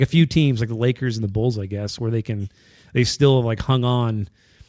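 Listening to the speech recording, nothing stood out as a technical problem.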